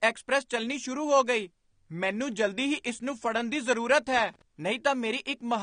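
From the start of the clip the speech carries plainly audible coding damage, and nothing is present above about 9.7 kHz. This is likely AAC compression, in the AAC-LC form, at a bitrate low enough that the encoder has dropped its upper band and quantised the remaining spectrum coarsely against its hearing model. The level of damage and the low cut-off fit a rate of around 32 kbps. The result is a band-limited top end and codec texture across the whole clip.

From 4.07 to 4.42 s, about a third of a second, there is loose connector crackle. A worn or dirty contact in the signal path was making and breaking in rapid succession, chopping the signal on and off in an irregular pattern. It is heard as a short, uneven burst of crackling and scratching laid over the speech.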